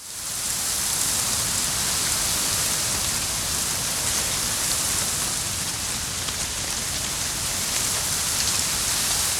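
Four isolated sharp clicks occur at 0.69, 1.66, 3.03 and 6.92 s. Each is a single instant, a thin vertical streak across the whole spectrum, and most likely comes from dropped samples: a fraction of a millisecond of the stream goes missing, so the waveform jumps straight to a later value. Unlike a dropout, no sound is lost and there is no audible gap or silence, only the brief discontinuity itself.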